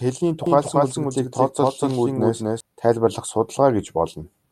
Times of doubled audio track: 0.46-2.60

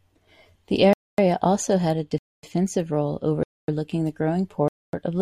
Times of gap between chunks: 0.93-1.18, 2.18-2.43, 3.43-3.68, 4.68-4.93

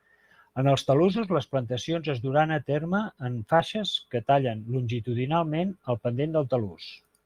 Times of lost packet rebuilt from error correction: 1.11-1.21, 2.27-2.29, 3.59-3.61

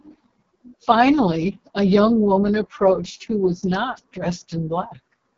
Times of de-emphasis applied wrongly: none

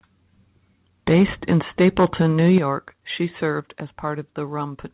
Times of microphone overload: 1.08-1.54, 1.80-2.58

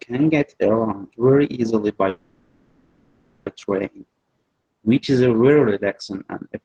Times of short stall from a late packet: none

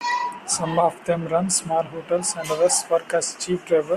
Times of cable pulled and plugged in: none

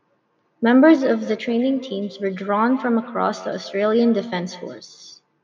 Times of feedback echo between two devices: 0.80-4.89

